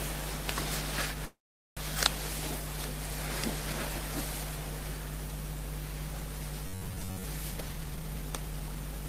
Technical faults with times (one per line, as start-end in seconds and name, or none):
1.25-1.79 call audio freeze
6.67-7.24 robotic sound from repeated short buffers
7.51-8.76 jitter buffer speed-up